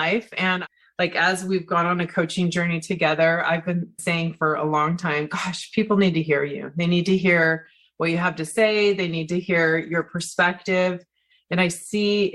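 Nothing wrong is audible anywhere in the clip.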